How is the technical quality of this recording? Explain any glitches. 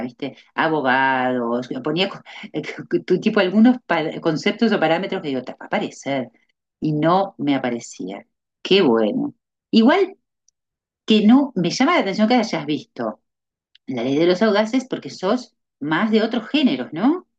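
No technical faults can be heard in this speech recording. There are no glitches to explain.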